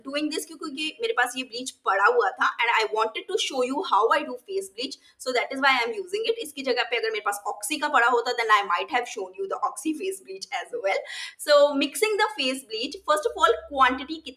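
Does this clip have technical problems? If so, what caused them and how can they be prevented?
Yes. A noise suppressor applied to music or sounds runs throughout. Built for speech, it mistakes sustained tones and tails for noise. Level swings by about 10 dB, so held sound pumps and thins while attacks pass. Bypass speech-oriented suppression when recording non-speech material.

Sound is cut by the noise suppressor at 0.45 to 0.66 s, 3.16 to 3.31 s, 4.96 to 5.22 s and 10.19 to 10.48 s. Level drops by up to about 15 dB, about 12 dB in the last. Sustained parts sink there. Disabling the suppressor prevents this.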